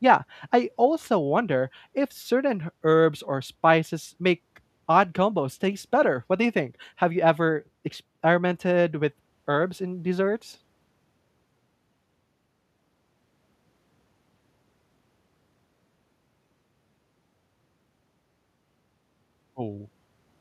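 No technical faults are audible.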